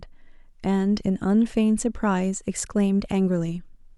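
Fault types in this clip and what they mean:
No faults detected: the speech signal shows no dropouts, clipping, distortion or other technical defects.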